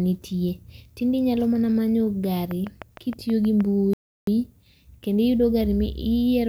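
A speech recording with two faults. From 2.51 to 3.62 s, a train of clicks ticks over the speech at a steady 6.4 per second, about seven in all. They stand a few decibels above the speech. Similar, evenly spaced pulses like these likely come from nearby equipment interference or a faulty connection or power supply. At 3.93 s, a Bluetooth stall cuts the audio to silence for 338 ms. It resumes at 4.27 s. Interference likely delayed wireless packets until the headphones' buffer ran dry.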